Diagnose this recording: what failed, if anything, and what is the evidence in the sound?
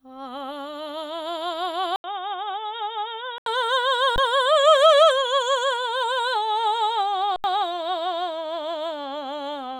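From 1.96 to 3.46 s the music dulls, with nothing above 3.8 kHz, drops about 5 dB and gains a new noise floor after an 80 ms silence. This likely points to the input switched to a poorer device. The changed noise floor rules out a codec narrowing its band.

Underrun with held sample at the driver or buffer stage, at 4.16 to 4.18 s and 7.36 to 7.44 s: the waveform freezes flat at its last value. When the audio resumes, roughly 20 ms and 70 ms have been lost.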